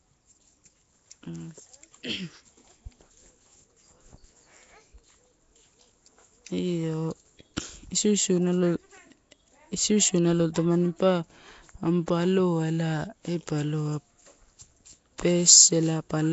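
Speech runs throughout with a rough, hissy halo clinging to it and a smeared, underwater quality, and nothing sounds above 7.7 kHz. That points to Nellymoser compression, likely the Nellymoser Asao coder from Flash-era microphone capture. It packs short blocks into a fixed two bits per sample, which fits a rate of around 32 kbps here. Weaker bands receive no bits and come back as filler noise, producing the hiss and blur that stay plainly audible across the whole clip.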